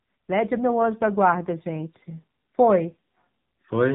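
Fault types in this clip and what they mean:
AMR narrowband mobile codec: The speech sounds heavily buzzy and synthetic, with a thin, boxed-in tone and nothing above about 3.8 kHz, the sound of a low-grade mobile call throughout. AMR-NB samples at 8 kHz and rebuilds speech from a vocal-tract model excited by a few pulses per 5 ms subframe. Damage this heavy points to one of its lower bitrate modes, around 6.7 kbps, where too few pulses leave the voice coarse and artificial.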